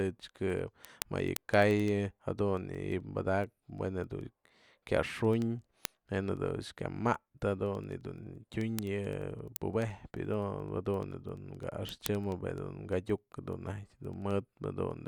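From 0.16 s to 15.00 s the speech carries word clock ticks: sharp ticks of uneven strength at a steady rate of about ten per second, around 150 in all. The receiving device is running on its own clock rather than locking to the sender's, so the two drift apart and a single sample is periodically dropped or repeated. That rate points to a clock mismatch of about 200 ppm. Unlike buffer dropouts, there are no audible gaps, and the spacing stays steady throughout.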